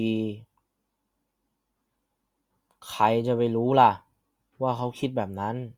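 Listened through, the speech recording shows no technical faults at any point.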